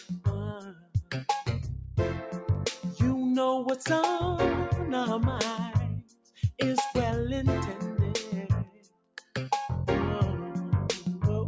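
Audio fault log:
throughout, noise suppressor applied to music or sounds: a suppressor tuned for speech stays engaged and keeps mistaking sustained tones, ambience and reverb for noise, so level swings by around 10 dB. Attacks pass while held parts and tails sink, giving a pumping, thinned-out sound.
0.00–0.26 s, 0.57–1.14 s, 6.01–6.39 s, 8.65–9.35 s, sound cut by the noise suppressor: in each stretch the suppressor judged the steady or decaying sound to be noise and pulled it down by about 15 dB at 0.00 s and about 18 dB in the other three, so sustains dip and decays end early.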